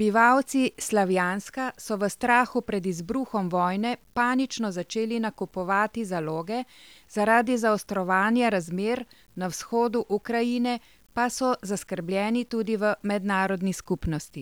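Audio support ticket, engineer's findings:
Grainy, signal-following distortion across the whole speech clip, worst on quiet syllables and decays; quietest tails sputter or drop to silence. Error floor sits around 40 dB below the signal, which fits a 9-bit word. Component: requantisation stage. Likely cause: low bit depth without dither, truncated, so rounding error tracks the waveform instead of becoming steady hiss.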